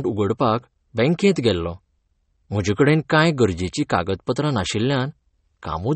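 Across the whole clip, the speech carries plainly audible codec damage, and there is nothing above 8.4 kHz, so the top end stops abruptly. The likely cause is MP3 compression at a bitrate low enough to fit about 32 kbps. With so few bits, the encoder drops weaker frequency components from one short block to the next and discards the treble above a fixed cut-off, which leaves the 8.4 kHz ceiling.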